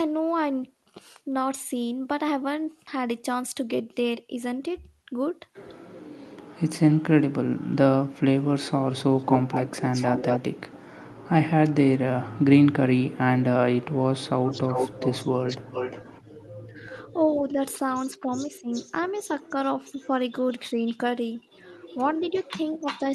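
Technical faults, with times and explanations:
9.18–10.40 s, echo leak: a copy of the speech returns about 194 ms late, only about 5 dB below it, likely from an incompletely cancelled loudspeaker echo. The spectrogram shows harmonic patterns doubled and shifted right.
14.47–17.02 s, echo leak: the delayed copy now trails by 354 ms at about 10 dB down, a fainter repeat. The waveform shows secondary envelopes lagging each syllable.
17.36–18.72 s, speech suppressed in double talk: the near speech dips by up to roughly 15 dB in brief pieces totalling about a third of a second, likely as the canceller attenuates while both sides overlap. The spectrogram shows short dark gaps.
18.31–20.93 s, echo leak: the same 354 ms echo returns but very faint, about 25 dB down, a ghostly trailing shadow visible as weak, offset copies of the harmonic bands.
21.87–23.15 s, echo leak: the 354 ms echo strengthens to about 15 dB below the speech, running to the end. 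The spectrogram shows lagging, lighter replicas of the speech bands.
21.95–22.86 s, speech suppressed in double talk: during the overlap the near speech briefly ducks by up to about 10 dB, roughly 100 ms in all, seen as short notches in the waveform envelope.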